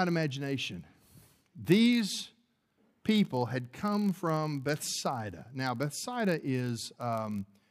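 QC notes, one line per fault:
Throughout, block size mismatch (padded). A steady 43.1 Hz buzz runs under the speech. That rate fits 1024-sample read blocks, each filled slightly short and padded with a tiny zero gap. Playback slows only to 0.999 speed, timbre unchanged.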